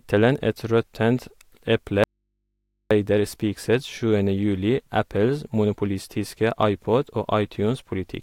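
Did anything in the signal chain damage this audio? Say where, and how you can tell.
Yes. An audio dropout to a faint residue runs from 2.04 to 2.91 s, about 0.87 s. The speech cuts abruptly to mains hum around 55 dB down and returns just as sharply. This is likely an intermittent analogue connection leaving the input open.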